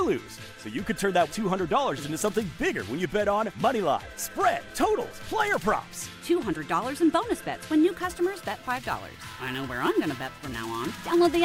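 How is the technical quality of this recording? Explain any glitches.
The recording has one clear fault, from 7.89 s to 11.19 s: sample clock jitter. The converter's timing wanders by something on the order of 10 microseconds, so each sample lands slightly off its intended instant. Where the waveform changes quickly, that timing error becomes an amplitude error, producing a grainy hiss roughly 25 dB below the signal. It thickens on loud, bright passages and falls away in quieter moments.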